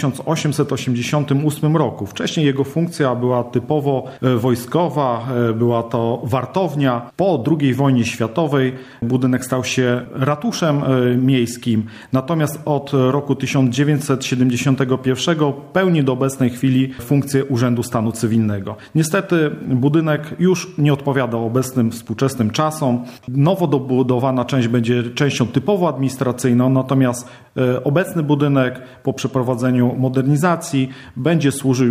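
No faults can be heard anywhere in this recording.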